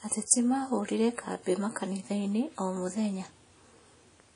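WMA compression, running throughout the speech from start to finish, is the likely cause of the damage here. A transform codec starved of bits smears its quantisation noise over tens of milliseconds around each sound, so transients ring and the texture turns washy, with a hiss that swells and fades with the level. Nothing survives above about 10.1 kHz, and the plainly audible damage points to a low bitrate of around 32 kbps.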